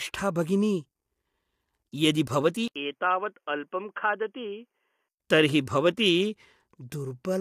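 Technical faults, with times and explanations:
Throughout: low-delay AAC compression. The whole clip has a rough, grainy texture, with a noise wash filling the gaps between the voice's harmonics and a top end that sounds thin and a bit synthetic. That points to the short-frame, low-delay AAC of video calls, likely AAC-ELD somewhere around 32 kbps. Frames that short can't separate closely spaced harmonics well, so at this rate the encoder smears them and fakes the highs.
2.68 to 5.17 s: input switched to a poorer device. Right after "यदि भवती" there's an 80 ms dropout, then the sound goes dull and boxy, with nothing above 3.3 kHz, a few dB quieter, and a faint new noise floor sitting well under the signal. At 5.17 s the original brightness comes back. That's most likely the system hopping to another mic or a headset's call profile and then back again.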